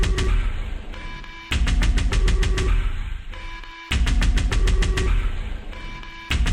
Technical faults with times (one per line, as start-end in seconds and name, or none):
none